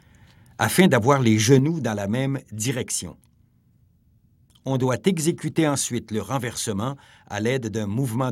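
Microphone overload at 0.79 to 0.81 s, just before "d'avoir les". A loud peak here briefly exceeds the converter's limit by about 1 dB, and its top is flattened. The likely cause is an input level set too high, so the converter runs out of headroom on the strongest moment. Only a small fraction of samples is cut, so the result is a short, harsh crackle on that peak.

Microphone volume stepped down at 1.6 s, between "d'avoir les" and "dans la même direction". The whole signal, background included, suddenly drops by about 5 dB and stays lower afterwards. This comes shortly after the distorted peak, and the pattern is that of call software likely reacting to it by cutting the device's input volume in a single step. It is heard as an abrupt, unnatural dip in loudness.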